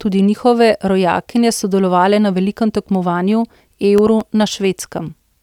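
From 3.32 to 4.65 s, just after "rojakinje sodelovale na velikem", seven CD scratch ticks occur, each lasting no more than a couple of milliseconds. A blemish defeats error correction once per disc revolution, so the player patches the samples. The steady spacing, about five per second, distinguishes these from random clicks.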